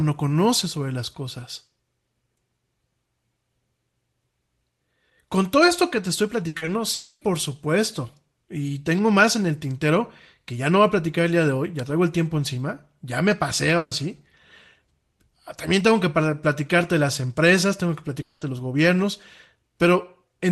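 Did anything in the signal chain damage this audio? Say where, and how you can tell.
Yes. The damage is at the network stage. A burst of packet loss hits at 6.47 to 6.55 s, just after "esto que te estoy", and again at 13.77 to 13.93 s. The receiver stretches the last sound into a fading buzz or hiss for about 60 ms and 140 ms, then resumes later, with that audio missing.

Short concealed packet loss follows right after the first burst, at 6.57 to 6.63 s and 6.65 to 6.69 s. These gaps are only 40 ms and 20 ms. The decoder continues the prior sound and blends back, so you hear a brief smear or wobble rather than a clear hole.

A long network dropout is the likely cause of two longer gaps. At 6.93 to 7.23 s, concealment runs about 280 ms, and the last 40 ms fall to silence. At 18.21 to 18.43 s, between "las empresas tengo que" and "los gobiernos", a fading fill covers about 200 ms of lost audio.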